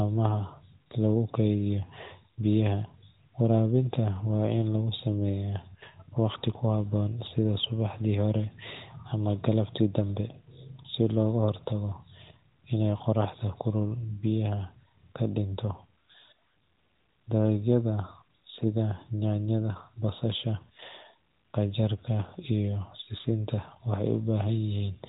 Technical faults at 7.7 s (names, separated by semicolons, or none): none